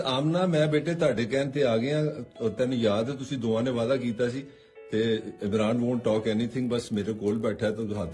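From 6.5 s to the end at 8.14 s, a steady 50 Hz buzz rides on the sound wherever there is signal. This is a resampler restarted on every block: each 20 ms block was converted from 48 kHz to 24 kHz separately, leaving a small error at every block edge.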